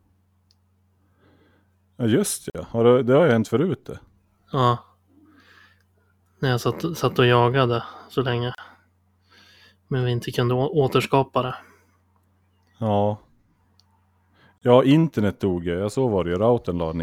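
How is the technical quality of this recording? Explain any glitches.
The speech has three short dropouts, each a gap at a join of encoded pieces. They fall at 2.50 to 2.55 s (48 ms), 8.55 to 8.58 s (34 ms) and 14.58 to 14.62 s (34 ms), every 6 s. The pieces were joined untrimmed, so each keeps its encoder delay and padding. Silence cuts in abruptly, its edges smeared, and the speech resumes where it stopped.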